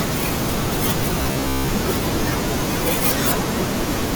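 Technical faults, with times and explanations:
1.22–1.70 s: robotic sound from repeated short buffers. The sound becomes a rigid, metallic 66.8 Hz buzz, likely from repeating a roughly 15 ms buffer. The waveform shows identical repeating cycles, and the spectrogram shows evenly spaced harmonic stripes.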